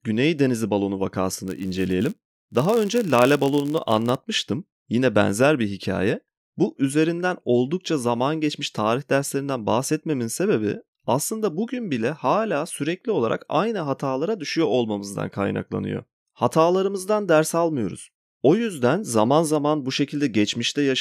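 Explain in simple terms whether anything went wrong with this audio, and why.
From about 1.47 to 4.18 s the speech picks up a steady buzz at roughly 91.5 Hz. That's a block size mismatch (padded): one stage hands over slightly shorter chunks of audio than the next stage expects, and the missing bit of each chunk gets filled with silence. Those tiny gaps repeating about 91 times a second make the buzz. The stretch also runs a touch slow, at 0.996 times normal speed.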